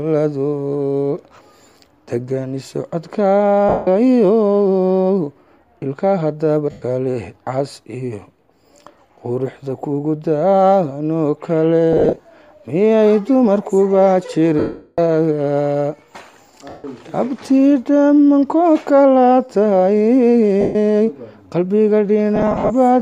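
Short noisy smears replace the sound at 3.69, 6.71, 11.93 to 12.25, 14.59 to 14.99, 16.69, 20.61 and 22.36 to 22.71 s. The 390 ms gap at 14.59 s fades audibly toward silence. These are lost LE Audio frames: the LC3 decoder filled each gap by reusing the last spectrum with random signs, then faded it as the loss went on. At 11.93 s and 22.36 s the losses came as scattered runs, the longest roughly 40 ms and 50 ms respectively.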